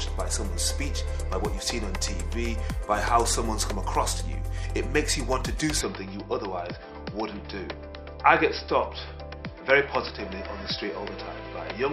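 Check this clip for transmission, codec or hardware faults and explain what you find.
One fault, from 5.81 s to the end: the input was likely switched to a poorer device. It passes nothing above 5.5 kHz, so the sound abruptly turns dull, drops about 5 dB, and gains a faint new noise floor.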